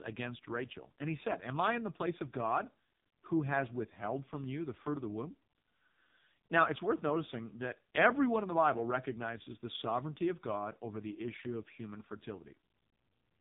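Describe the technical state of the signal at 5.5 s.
At 5.5 s the speech carries AMR narrowband mobile codec damage, present for the whole clip rather than just this moment. Nothing above about 3.7 kHz survives, so the sound is dull and muffled. The codec rebuilds the voice from a vocal-tract model excited by a few pulses per short subframe. Here the damage is heavy, which fits one of the lowest AMR-NB modes, near 5 kbps. The voice sounds buzzy and synthetic.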